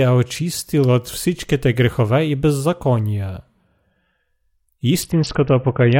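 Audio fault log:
5.02–5.99 s, Bluetooth SBC bit pool drop: treble dulls and gritty noise rises to the end. Coarser quantisation fits a bit pool falling from 31 to 6, near 55 kbps.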